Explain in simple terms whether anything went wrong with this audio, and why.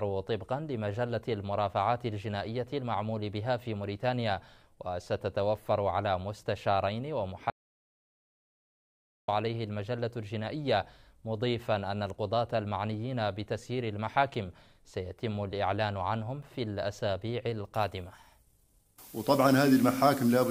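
Two things went wrong. From 7.5 to 9.28 s there is an audio dropout to silence: total digital quiet with no room hiss, unlike a natural pause, likely from a lost input connection. From 17.74 s to the end, pre-emphasis was left on: the treble suddenly turns harsh, thin and hissy, as though the highs were boosted and never turned back down.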